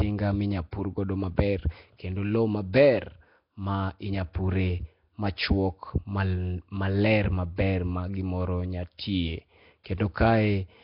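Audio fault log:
throughout: Nellymoser compression, likely the cause of the rough, hissy halo hanging around the speech and that smeared, underwater feel. Nothing comes through above about 5.3 kHz, and the damage is heavy, which fits a low rate of roughly 22 kbps. At that rate the coder spends only a couple of bits per sample, so quieter bands get no bits at all and are filled in with noise, giving a grainy, washed texture.
9.84 s: pre-echo, a brief hiss smeared in just ahead of a sharp attack, spreading about 19 ms before it so the onset sounds soft rather than crisp. The codec works in blocks and spreads its quantisation noise evenly across each one. When a loud transient lands late in a block, noise sized for that loud moment also fills the quiet stretch before it, and you hear it as a little rush leading into the attack.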